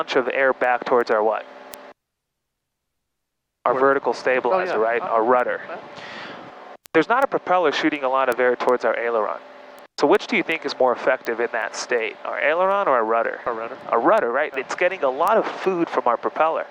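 From 0.27 s to 16.37 s, sharp word clock ticks recur roughly every 0.4 s, about fifty in all. Their strength varies. The receiving device runs on its own clock, off by around 50 ppm, so each slip drops or repeats one sample.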